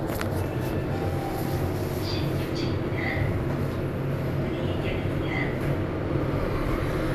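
Listening to this recording of everyday sounds, nothing stood out as a technical problem.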